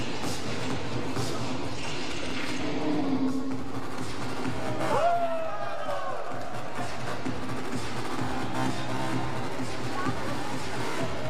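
A DC offset runs through the whole clip. The waveform sits shifted off zero by a constant amount, about -28 dBFS. You cannot hear it as a tone. It eats into headroom on one side and appears as steady energy at 0 Hz.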